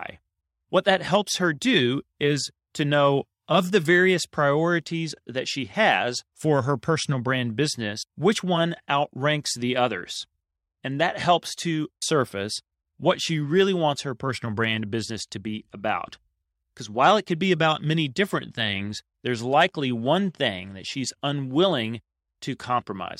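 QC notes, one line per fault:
No faults heard in this speech recording.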